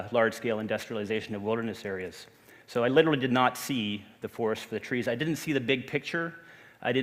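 No technical fault can be heard anywhere in the audio. There is nothing to time or trace back to a cause.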